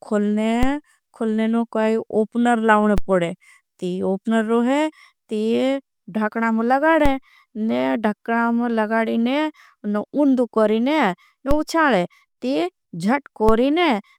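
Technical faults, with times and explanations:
0.63, 2.98, 7.06, 11.51 and 13.49 s: DC step. The waveform's zero line jumps by about −9 dBFS at each point, first just before "खुलनें काई ओपनर लावनें" and again before "पड़ें ती ओपनर", giving a low thump as the speech continues. Each offset then decays away along a 5 Hz high-pass curve.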